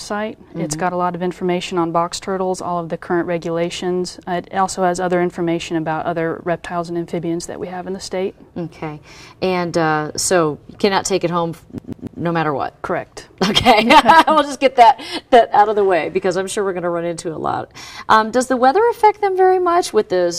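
At 11.78 s the CD sticks on one turn until 12.21 s: a 144 ms loop repeats three times, each jump muted briefly, giving that quick, even skipping stutter.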